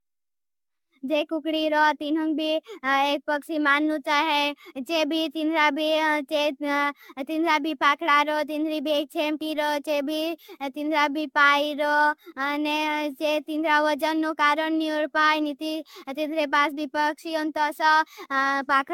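From start to finish the speech shows generation loss: a swirly, smeared quality with hollow-sounding gaps in the spectrum, blurred consonant attacks, and nothing above 17 kHz. The damage is heavier than a single encode at this bandwidth would leave, which fits repeated AAC-LC passes around 96 kbit/s, likely about ten decode-and-re-encode cycles. Each pass requantises on a shifted frame grid, so the noise and spectral holes build up.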